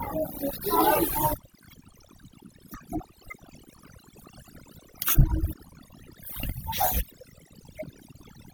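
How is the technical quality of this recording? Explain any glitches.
The recording is held back by overdone noise removal, present from start to finish. A noise reduction stage was pushed too hard, so any frequency band sitting close to its noise estimate is pulled far down or switched off, and the softer parts of the speech get caught as well. Between phrases the background drops and breaks up into twinkling specks. Unlike a noise gate, which mutes everything at once, this removes individual bands, leaving that sparkling residue.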